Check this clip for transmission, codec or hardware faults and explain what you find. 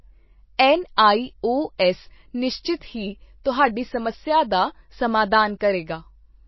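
One codec fault runs through the whole clip: likely MP3 compression. Nothing sounds above 5.8 kHz, and weak spectral detail flickers between frames, giving a watery, swirly texture and smeared consonant attacks, which fits a low bitrate around 24 kbps. A plain low-pass filter would dull the sound without that frame-to-frame swirl.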